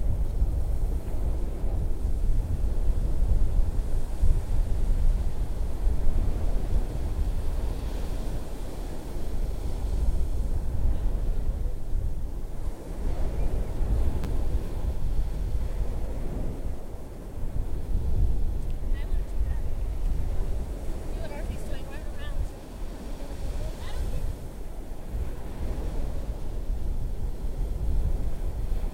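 No technical faults can be heard in this audio, so there are none to describe in time order.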